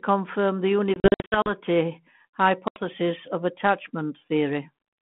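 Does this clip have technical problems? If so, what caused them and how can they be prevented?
Yes: packet loss on an ADPCM call, heard as hard-edged silent holes scattered from 0.94 to 1.52 s (280 ms lost, longest run 60 ms) and another at 2.68 to 2.80 s. The decoder's adaptive predictor loses step, so sound resumes slightly distorted. Waveforms show flat stretches, and spectrograms show blank vertical slots. Redundant packets with loss concealment prevent this.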